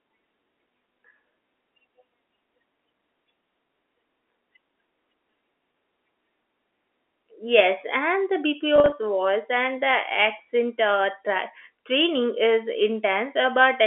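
At 5.72 s the speech briefly holds a slightly buzzy, stretched tone, and from 8.76 to 8.92 s that same held buzz recurs in several short bursts. Both are packet loss with pitch repetition: the receiver bridged each gap by repeating the last pitch period. The first gap is a single 20 ms loss. The second totals 100 ms scattered over 160 ms, with no run longer than 40 ms, which fits about five lost 20 ms packets on this G.711 telephone line.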